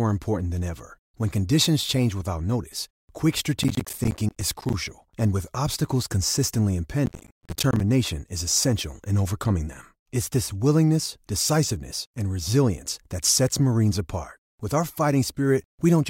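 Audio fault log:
3.64–4.74 s: processor overload crackle, after "change without notice quick", with roughly 10 ms buffers missed repeatedly and left silent, so gaps with hard edges produce gritty tearing.
7.06–7.80 s: processor overload crackle, before "is essential in overcoming", where many short buffers miss their deadlines and drop to silence, heard as a burst of crackle.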